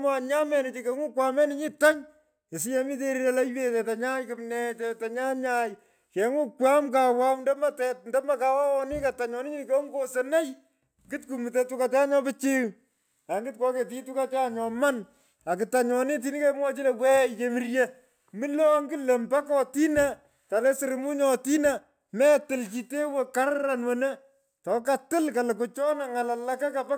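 Throughout the speech, imaging from linear upsampling is audible. Straight-line interpolation, which fits a rise from about 22 kHz to 48 kHz, dulls the top and leaves a mirror image between 11.03 and 22.05 kHz, roughly 30 dB down. Unlike aliasing, which folds tones downward, this faint metallic shimmer sits above the band on sibilants.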